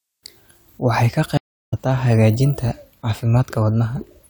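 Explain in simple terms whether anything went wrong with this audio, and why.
At 1.37 seconds the speech drops out for about a third of a second, then comes back at 1.74 seconds having skipped ahead by roughly 0.3 seconds. That is a stream reconnect: the connection broke, and the player rejoined the stream further along.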